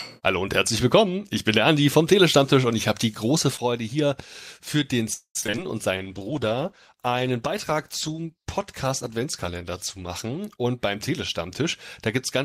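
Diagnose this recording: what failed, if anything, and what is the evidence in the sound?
At 5.13 to 5.37 s the sound stalls. The last fragment is stretched into a fading buzz for about 216 ms, and the final 80 ms is silent. The audio then resumes exactly where it stopped, with nothing skipped. This points to the network stage and is likely a call audio freeze: late packets drained the jitter buffer, and the receiver bridged the wait, adding 216 ms of delay. Unlike packet loss, no content is missing.

Right after, from 5.41 to 5.59 s, the sound turns choppy. That is repeated packet loss (robotic sound). Five short holes, the longest 12 ms, break the flow, and about 100 ms of content disappears while only 45 ms is patched over by extrapolation, so roughly a quarter of the span is concealed. This is also a network fault, but it differs from the freeze because material is actually lost rather than delayed.

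From 5.96 to 10.46 s the sound becomes coarse and muffled, with the top end gone. This is a call bitrate drop at the codec stage. The bandwidth estimate fell, and the encoder went from 48 to 14 kbps, staying at that floor for about 4.4 s, which also narrowed the coded bandwidth. Unlike loss, the timing stays continuous and only the quality degrades.

From 5.98 to 6.41 s the sound drags at unchanged pitch, running at 86% speed, and sustained parts are drawn out. This is a jitter buffer slow-down at the receiver's buffer stage. Repeated pitch periods were inserted, adding 67 ms to rebuild a reserve. Unlike the freeze, there is no stall or fade, just an even stretching.

From 10.57 to 11.62 s the sound runs hurried at 110% speed with the pitch intact. This is a jitter buffer speed-up, also at the buffer stage. The receiver trimmed short pitch-period slices, about a tenth of a second in total, to bring an overfull buffer back to its target. 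Unlike loss, the audio sounds rushed rather than broken.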